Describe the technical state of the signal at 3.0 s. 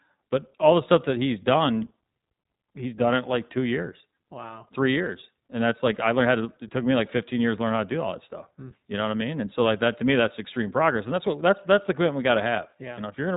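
At 3.0 s the speech carries iLBC codec damage, present throughout the clip. Each 20 ms frame is coded independently, leaving a plainly rough, slightly synthetic texture, and nothing passes above 3.8 kHz. The character fits the codec's 15.2 kbps mode.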